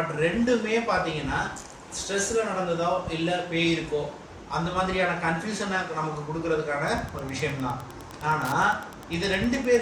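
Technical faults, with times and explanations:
6.79 to 9.81 s, Wi-Fi interference: the audio circuit rectifies a nearby Wi-Fi beacon repeating every 102.4 ms, producing a steady tick about ten times a second, roughly 25 dB under the signal. A spectrogram shows evenly spaced thin vertical broadband lines, and the waveform shows regular small spikes.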